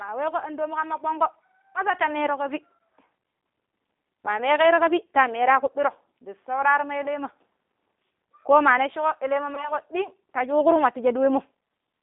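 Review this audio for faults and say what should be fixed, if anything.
Throughout the recording the speech carries G.729 codec damage that is plainly audible. The band is confined to roughly 250 Hz to 3.7 kHz, and the roughness and slightly synthetic texture fit an 8 kbit/s G.729A path. Each 10 ms frame is rebuilt from a vocal tract filter, a pitch predictor and a handful of fixed pulses rather than the original waveform. This costs natural timbre and all content above the telephone band. To prevent it, carry the call on a wideband codec such as G.722 or Opus instead of G.729.

At 9.55 s there is VoIP packet loss concealed by the speech codec. The gap is consistent with a single lost 20 ms packet. The decoder covers the hole by extending the last pitch and filter state with decaying gain, so the sound is briefly stretched and fades. Because each frame's prediction depends on the one before, the distortion persists after packets resume and clears around 9.72 s, about 170 ms in all. 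To prevent it, reduce network loss with QoS prioritisation and an adequately sized jitter buffer, or enable forward error correction.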